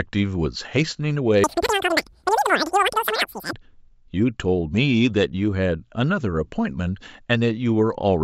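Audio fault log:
1.44–3.53 s, wrong sample rate: speech plays 3× fast, 19 semitones high, fitting 16 kHz played at 48 kHz; spectrogram harmonics stretch upward, waveform squeezed.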